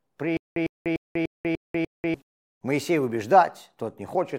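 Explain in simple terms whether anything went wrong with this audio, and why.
From 0.37 to 2.14 s there is a stutter with silent gaps: a 103 ms burst of sound repeats six times, each followed by about 193 ms of dead silence. Playback likely stalled and kept replaying its last fragment, so the audio from that stretch is missing.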